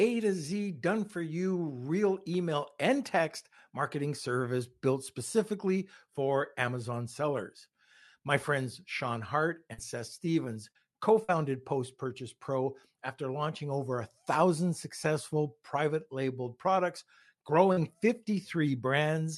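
Repeated packet loss (robotic sound) runs from 9.73 to 11.30 s. Three separate holes, about 120 ms in all with the longest near 41 ms, were each bridged by extending the preceding sound, around 70 ms of it rebuilt. The result is choppy speech with fragments missing.

Short concealed packet loss follows at 17.72 to 17.80 s. Roughly 40 ms never arrived in time, so the decoder continued the last sound to cover it and then blended back into the real signal, heard as a brief smear or wobble.

A lost packet rebuilt from error correction sits inside that stretch at 17.77 s. The next packet carried a low-bitrate copy of these 20 ms, Opus in-band forward error correction, so nothing drops out, but the frame sounds rougher and noisier. The Opus call path at 64 kbps limits the audio to about 12 kHz.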